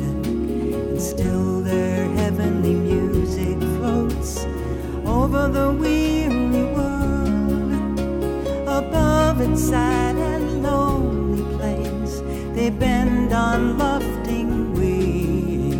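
At 3.43 s a single sharp snap sits on top of the sound. It is an electrical switching spike, lasting only a couple of milliseconds and peaking around -15 dBFS. The likely cause is a nearby switch or static discharge arcing and coupling into the audio line.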